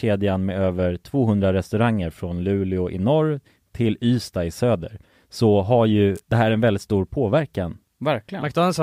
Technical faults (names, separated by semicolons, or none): electrical switching spike